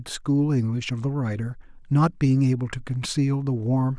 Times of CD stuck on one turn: none

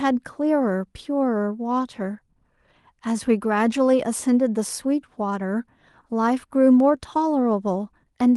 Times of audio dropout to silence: none

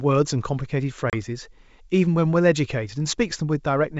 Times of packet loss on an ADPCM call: 1.10-1.15

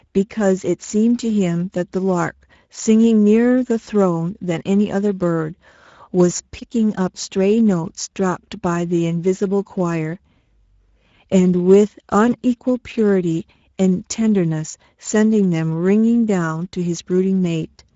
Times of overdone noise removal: none

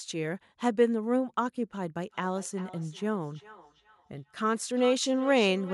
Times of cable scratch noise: none

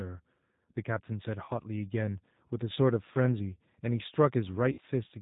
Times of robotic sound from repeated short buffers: none

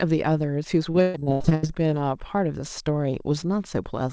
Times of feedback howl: none

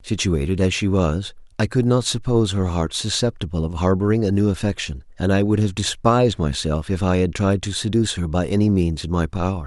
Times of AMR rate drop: none

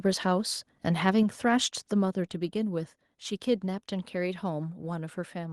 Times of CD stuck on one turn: none

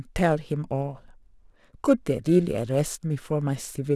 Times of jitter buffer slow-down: none

